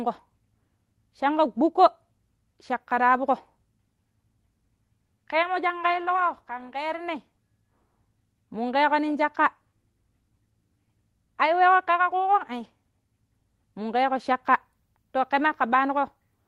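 No technical faults are audible.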